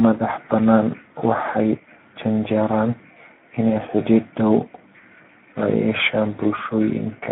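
Thin and boxed-in from start to finish, the speech carries a grainy, hoarse roughness that stays plainly audible across the whole clip, with nothing below about 200 Hz or above 3.4 kHz. This is Speex codec damage: the CELP coder has too few bits to model the excitation signal faithfully, so the voicing comes out noisy. The roughness points to a low bitrate of around 11 kbps, and the narrow band to a telephone-grade line.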